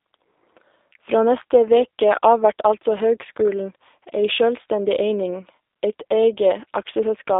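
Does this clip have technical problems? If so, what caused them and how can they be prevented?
Yes: G.729 codec damage runs throughout, with speech confined to 300 Hz to 3.7 kHz and rebuilt from a filter-and-pulse model that sounds rough and synthetic, as an 8 kbit/s stream would. To avoid it, use a wideband codec such as Opus or G.722 wherever the link allows.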